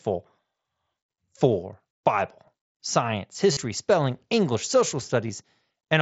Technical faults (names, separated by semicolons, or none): concealed Bluetooth headset packet loss